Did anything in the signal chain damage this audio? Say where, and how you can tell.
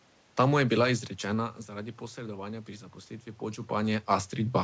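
No, no stage in the chain damaged this audio.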